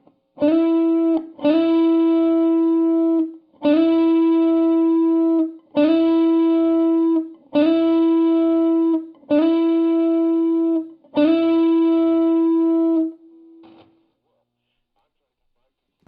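Throughout, the audio carries sample clock jitter: the converter's timing wanders by something under a microsecond, so steep, loud or bright passages pick up a faint hiss-like roughness roughly 55 dB below the signal that disappears whenever the sound falls silent.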